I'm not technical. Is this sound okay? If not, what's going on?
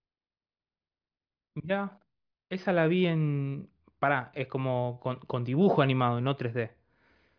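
Yes, this recording is fine. Nothing in the speech shows any technical problem.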